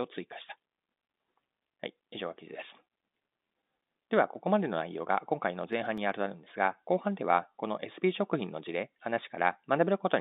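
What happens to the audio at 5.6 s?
CD scratch ticks, five in all from 5.61 to 6.10 s: brief clicks, the longest about a millisecond, where a disc blemish outran error correction and the player patched or muted samples.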